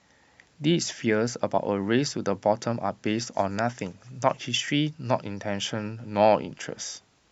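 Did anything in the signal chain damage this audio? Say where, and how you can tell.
No, nothing in the signal chain audibly damaged this speech recording. No stage, from capture through to playback, leaves a mark that can be heard anywhere in the clip.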